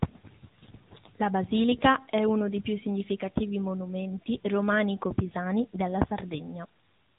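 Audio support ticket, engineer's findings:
Thin, buzzy, synthetic-edged speech throughout, nothing above 3.8 kHz. AMR narrowband mobile codec: 8 kHz vocal-tract model with pulse excitation; plainly audible damage fits a 10.2 kbps mode.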